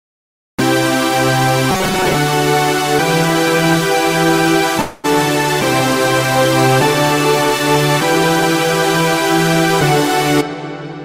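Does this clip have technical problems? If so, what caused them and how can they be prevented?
Yes. Robotic sound from repeated short buffers, 1.71 to 2.15 s: a rigid metallic buzz at 188 Hz, likely from a roughly 5 ms block being replayed while about half the real audio was skipped. Keeping the processing thread fed on time, with a larger buffer or higher scheduling priority, prevents this.

Call audio freeze, 4.81 to 5.06 s: the sound is held as a fading buzz for 224 ms after the jitter buffer likely ran empty, then resumes where it stopped, adding a 224 ms delay with nothing missing. An adaptive jitter buffer with more headroom and a steadier network path prevent this.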